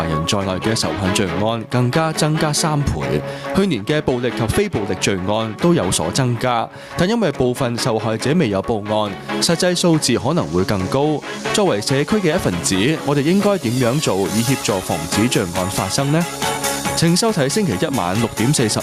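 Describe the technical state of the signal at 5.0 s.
At 5.0 s you're hearing gain pumping that runs the whole clip: the gain swings by around 15 dB as loud sounds pull it down, leaving loud and soft parts closer in level and the sound squashed, likely from a fast limiter fighting excessive gain.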